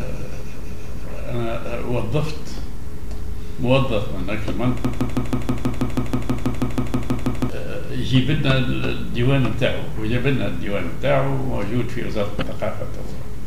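A 161 ms fragment repeats sixteen times back to back from 4.85 to 7.50 s, a broken-record loop, likely from a stalled stream resending its last piece.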